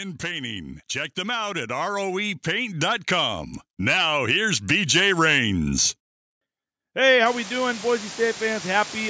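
From about 0.21 s the level starts creeping up and keeps climbing until around 5.8 s, a rise of about 12 dB. That's automatic gain rising: the gain control decided the input was too quiet and slowly turned itself up. Because it's boosting everything it hears, the room noise and the speech swell together, so the background gets noticeably louder along with the talker over those few seconds.

Then at 7.26 s, running to the end at 9.09 s, a steady, even hiss appears under the speech, fairly loud and sitting not far below the level of the talker. That's low bit depth with dither. The signal is being stored in very few levels, which fits something like 5 bits, and dither was added before rounding. That turns what would have been gritty distortion into flat white noise that doesn't change with the speech. The band is capped at 8 kHz, which is just the call microphone processing.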